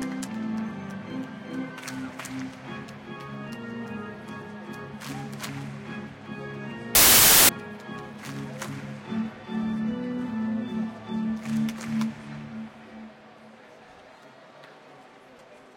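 From 6.95 to 7.49 s the audio turns into loud, harsh broadband noise: samples built from the wrong bytes. The decoder assembled each sample from misaligned or swapped bytes, so the rapidly varying low-order bits landed in the high-order positions.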